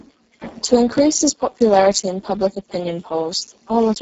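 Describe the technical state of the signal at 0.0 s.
At 0.0 s the speech is already coming through a Speex codec, and that lasts the whole clip. It sounds hoarse and grainy, edging toward robotic, which points to a very low bitrate around 6 kbps that starves the CELP excitation. Nothing survives above 7.7 kHz.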